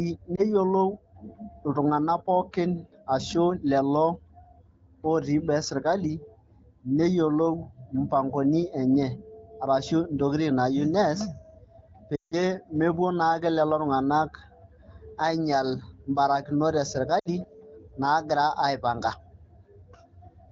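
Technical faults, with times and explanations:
0.35 to 0.42 s, 12.15 to 12.34 s and 17.19 to 17.28 s, lost AMR speech frames: gaps of about 20, 160 and 60 ms, which fits one, eight and three 20 ms frames. The decoder repeats the last good pitch and vocal-tract settings at falling gain, so the first is a brief dip or warble. The longer two drop to near silence within two frames before "mepuo naake lelo tung'anak" and after "ainyial mbarakinot", fading quickly as wideband decoding does, instead of a hard click or abrupt silence.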